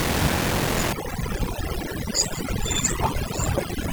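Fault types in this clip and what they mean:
Block size mismatch (padded): One stage hands over shorter blocks than the next one reads, which fits a 1024-sample read block, and the leftover space in each block gets filled with zeros. So there's a tiny gap in every block, and you hear it as a steady buzz at about 43.1 Hz right through the clip. The sound also drags, running at about 0.861 times normal speed, while the timbre stays the same.
Overdone noise removal: From about 0.93 s to the end, the noise reduction is cranked way too hard. Any frequency band it decides looks like noise gets pushed far down or switched off, and quieter bits of the speech get caught along with it. The room noise, which sits about 22 dB below the speech, turns into near silence with little twinkling specks.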